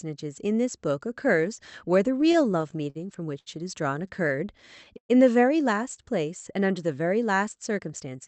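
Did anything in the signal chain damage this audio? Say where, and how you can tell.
Yes. Repeated stalls (stutter) between 2.21 and 2.97 s come from the network and jitter buffer: seven late-packet gaps, up to 51 ms, were bridged by continuing the sound.

A short stall from a late packet at 3.39 to 3.48 s holds one sound for 73 ms while the buffer waits, then resumes without loss.

Scattered short gaps from 4.08 to 4.60 s show as about four brief ticks or smears where isolated lost packets were patched, each well under 20 ms.

A jitter buffer slow-down from 4.36 to 4.94 s plays at 92% speed with unchanged pitch, stretching sounds by 54 ms to rebuild the reserve.

A call audio freeze at 4.98 to 5.11 s holds the last sound, then drops to about 90 ms of silence before resuming, likely from held-up packets.

A jitter buffer speed-up from 7.79 to 8.22 s runs at 110% speed, same pitch, trimming roughly 50 ms to cut excess buffered delay.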